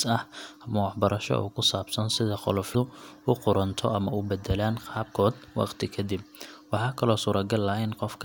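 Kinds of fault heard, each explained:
Damaged data in a compressed stream: corrupted bytes in the encoded speech make the decoder misread frames and lose sync, giving a brief glitch from 2.72 to 2.75 s, between "ku saabsan sida" and "u qudhunto ama". A spectrogram shows a sharp break; the waveform shows an abrupt discontinuity.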